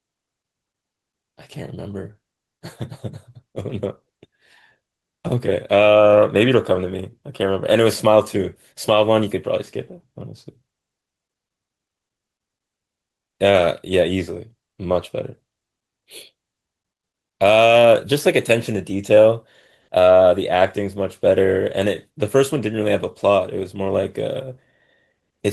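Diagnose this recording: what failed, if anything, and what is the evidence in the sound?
Nothing failed; no faults detected.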